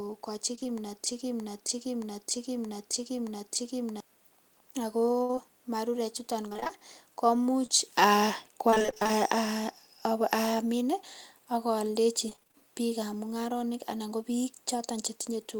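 Right at the start, 0.55 to 0.67 s, there's repeated packet loss (robotic sound): short gaps patched by stretching the last sound, so it goes choppy. Then from 1.06 to 4.00 s a broken-record loop repeats a 0.62 s piece five times back to back, likely a stalled stream resending what it held, and the speech meant for that stretch is gone. The choppy packet loss comes back from 5.23 to 5.39 s, between "ak ko" and "marure chuton", again from 6.49 to 9.11 s after "marure chuton" as lots of small dropouts, and from 12.29 to 12.56 s after "ak aldechi".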